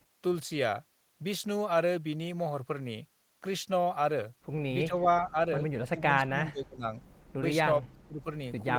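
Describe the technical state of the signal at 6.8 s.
Speech suppressed in double talk, 5.89 to 6.84 s: the level dips by roughly 30 dB, likely because the echo canceller muted the talker during overlapping speech.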